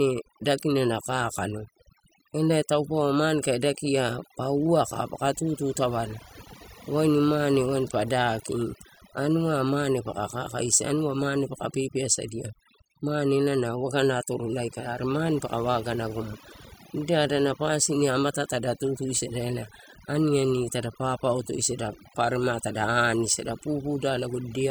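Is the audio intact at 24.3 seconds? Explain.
No, not really. At 24.3 seconds you're still hearing the overdone noise removal that runs through the whole clip. The noise reducer was pushed too hard, so any frequency band sitting close to its idea of the noise floor gets pulled way down or shut off, and the softer parts of the speech get taken out along with it. So the background drops and breaks up into little twinkly, warbling specks.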